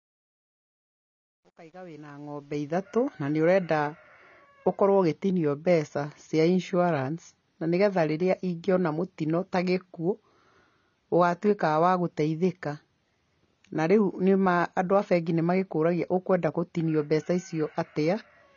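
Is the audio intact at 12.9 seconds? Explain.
No. At 12.9 seconds the speech sounds dull and smeared, with a watery, fizzy edge on sibilants and nothing audible above about 7.2 kHz. This holds throughout the clip. The likely cause is AAC compression, AAC-LC at a low rate that points to about 24 kbps. To save bits, the encoder has pulled its cut-off down and quantised the remaining frequency lines so coarsely that the fine detail breaks up into that warbling texture.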